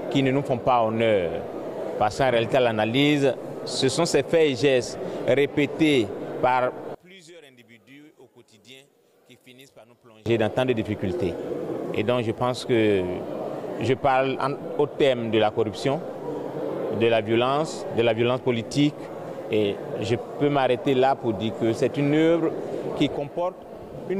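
From 6.95 to 10.26 s the sound collapses to a faint remnant, roughly 28 dB quieter, with nearly all of it, background included, gone. This points to one channel inverted: likely one side's polarity flipped, so the shared content cancels when the channels combine.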